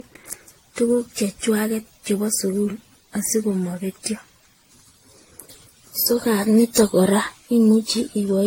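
Throughout the speech, the sound is swirly, hollow and smeared, with attacks blurred and nothing above 16.6 kHz. That points to generation loss, likely from about seven passes through an AAC-LC codec at 64 kbit/s. A single encode at that rate would not smear this much.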